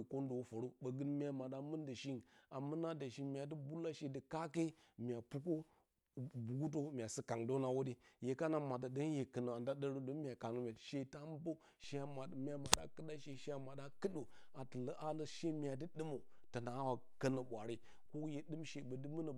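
A DC step at 11.84 s offsets the zero line by about -53 dBFS, holding to the end; the jump sounds as a faint low thump beneath the speech.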